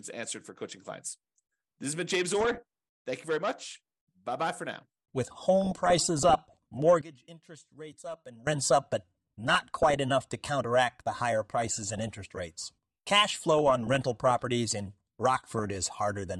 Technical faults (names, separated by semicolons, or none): DAB burbling; one channel inverted